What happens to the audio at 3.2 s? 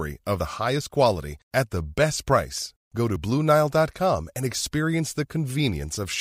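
At 3.16 s the speech jumps abruptly: the sound skips forward with no gap of silence, as though roughly 40 ms were cut out and the edges butted together. This is most likely a dropped buffer (overrun). The recording software failed to collect a block of samples before the hardware overwrote it, so that stretch was lost and the audio on either side was joined directly.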